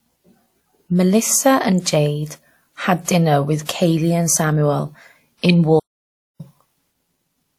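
A short burst of hiss arrives just ahead of a sharp onset at 3.04 s, lasting about 37 ms before "dinner with", and again at 3.65 s for about 38 ms, right after "had dinner with". Both attacks come through softened and smeared. This is pre-echo: a transform codec spread the quantisation noise across the whole block, so noise scaled for the loud attack also filled the quiet stretch in front of it.

From 5.79 s to 6.41 s the sound stops in mid-flow and goes silent for roughly 0.6 s before continuing. This playback stall was likely caused by the player running out of data or having its thread blocked, leaving the output empty until it recovered.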